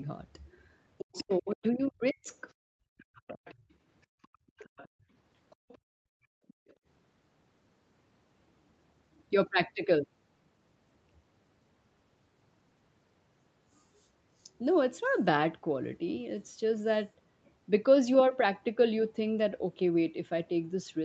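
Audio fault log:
0.98–2.52 s, 3.15–3.55 s, 4.22–4.88 s, 5.5–5.78 s, 6.48–6.74 s: other side's voice leaking through. A faint second voice, about 15 dB below the talker at first, then about 25 to 30 dB down, is likely loudspeaker echo the canceller missed. It is a separate voice, not a dip in the talker's own.
1.08–3.65 s: speech suppressed in double talk. For roughly two seconds the talker's own voice sinks by up to around 40 dB while the other voice is present, likely because the canceller pulled both down together.
4.07–6.86 s: background gated by the echo canceller. The room tone, not the voice, drops by up to about 33 dB for about 1.5 s in total and returns once the canceller releases the microphone.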